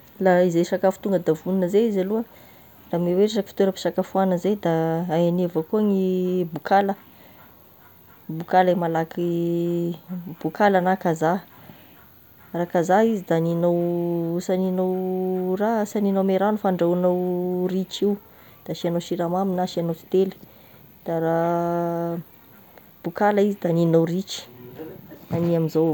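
Nothing stood out as a technical fault on listening to this speech recording.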